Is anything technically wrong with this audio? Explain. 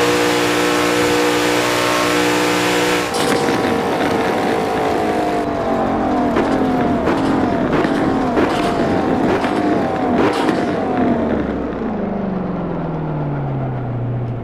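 No, no technical faults found.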